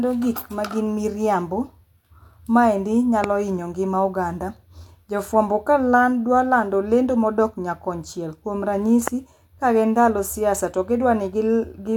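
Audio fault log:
3.24 s and 9.08 s, loud pop: each is a single sharp pop lasting about 20 ms, peaking roughly 15 dB above the speech, while the speech carries on underneath without a break. The likely cause is a sudden voltage step or pulse entering the signal chain, from a plug, a switch, static discharge or a driver glitch. The circuits after that point shape it into a brief click-like burst, heard as a pop.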